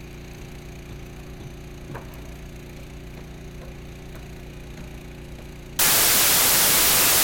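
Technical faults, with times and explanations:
5.79–7.23 s, samples built from the wrong bytes: right at the tail the audio collapses into loud, harsh broadband noise that runs to the end of the clip. The reader's stitching each sample together from the wrong bytes, either shifted by one, swapped, or misaligned, so the jittery low-order bits end up driving the big part of every value. That's why it's a harsh roar rather than the sound.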